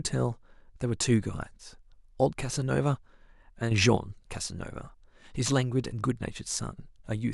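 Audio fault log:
3.71–3.97 s, sudden gain jump: the speech and the background noise beneath it rise together by about 7 dB in a single step, with no fade in, hold at that raised level for roughly a quarter of a second, then drop back just as abruptly at 3.97 s. Because the noise floor moves in lockstep with the voice, the change sits in the signal chain rather than with the talker, most likely a digital gain setting applied and then removed without any ramp.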